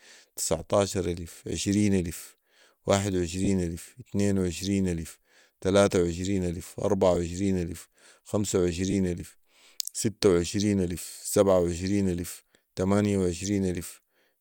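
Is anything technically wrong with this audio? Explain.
Yes. This speech clip has lost LE Audio frames in three places: 3.45 to 3.48 s, 7.15 to 7.17 s, and 8.91 to 8.94 s. The first and last gaps are about 20 ms, which fits two lost 10 ms frames. The middle gap fits one. For each gap the LC3 decoder repeated the previous spectrum with random signs. Tonal speech becomes a short noisy smear. On a spectrogram, the harmonic lines blur into diffuse energy for a sliver. The waveform shows a brief burst of incoherent noise.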